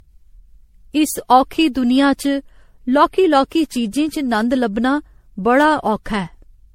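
Throughout the speech the sound is swirly, smeared and hollow, with blurred attacks and nothing above 16.4 kHz. The likely cause is generation loss: around ten successive MP3 encodes, consistent with 64 kbit/s. Each pass requantised on a shifted frame grid, so noise and spectral holes accumulated.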